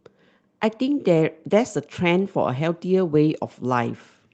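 Between 1.49 and 1.55 s, and again from 3.33 to 3.35 s, packets were lost and the decoder played their low-bitrate copies (a lost packet rebuilt from error correction), so there is no gap, but those moments in the Opus audio, band-limited to 8 kHz, sound briefly rougher and noisier.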